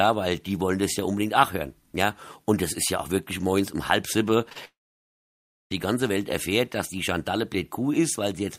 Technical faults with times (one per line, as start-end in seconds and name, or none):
4.49-4.57 short concealed packet loss
4.65-5.72 long network dropout